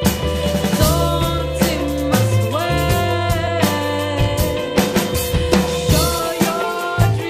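Two brief glitches cut into the sound, at 2.12 s and from 3.46 to 3.48 s. Both are damaged data in a compressed stream: corrupted bytes make the decoder misread frames, lose sync and hunt for the next valid frame header.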